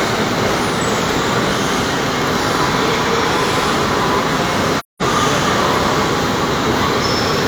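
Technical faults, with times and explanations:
4.79–5.02 s, AAC frame loss with muting: the sound drops into a silent gap about 0.21 s long, consistent with roughly five lost frames. The decoder zeroes the missing spectra, and the overlapping transform windows taper the sound out and back in, giving soft edges.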